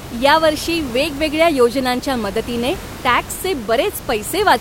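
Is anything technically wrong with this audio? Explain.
No, the speech signal is technically sound, and the only other thing audible is the room's own background noise sitting about 15 dB below the speech, which was captured with the recording rather than introduced by the system.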